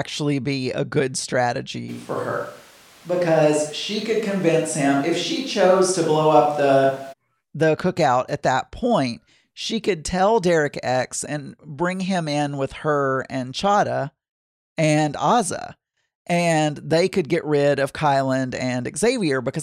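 At 1.90 s, just before "the cookout at that", the speech abruptly turns roomy and hollow, with thinner bass. The level stays about the same, but background noise rises to roughly 30 dB below the speech. This is likely a switch to a distant microphone. The close sound snaps back at 7.11 s.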